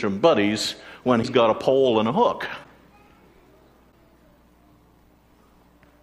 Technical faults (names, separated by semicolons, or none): broken MP3 bit reservoir